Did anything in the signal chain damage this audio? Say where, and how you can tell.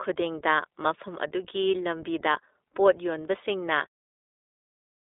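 Yes. The codec stage applied iLBC coding throughout. Nothing passes above 3.8 kHz, and the speech sounds plainly rough and synthetic, consistent with 20 ms frames at about 15 kbps.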